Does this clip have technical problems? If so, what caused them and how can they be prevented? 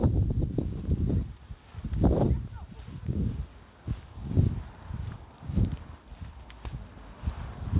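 Yes. Aliasing runs throughout: content above 4 kHz folds back as faint gritty, metallic tones, which fits an unfiltered downsample to 8 kHz. Apply a low-pass filter below 4 kHz before resampling.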